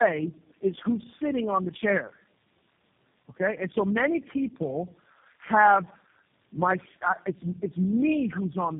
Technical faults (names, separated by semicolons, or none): tandem speech coding